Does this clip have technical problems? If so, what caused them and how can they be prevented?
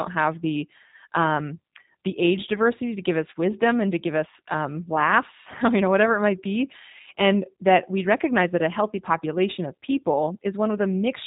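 Yes. Throughout, the speech sounds thin, slightly rough and synthetic, with nothing above 3.8 kHz. This is G.729 codec damage: each short frame is resynthesised from a vocal-tract model, pitch prediction and sparse pulses, which fits an 8 kbit/s VoIP link. Prevent it by negotiating a wideband codec such as Opus or G.722.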